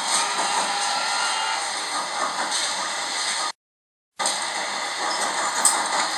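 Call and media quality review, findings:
Playback stall, 3.50 to 4.20 s: output drops to silence for about 0.68 s mid-sound, then resumes. Likely player buffer underrun or blocked audio thread.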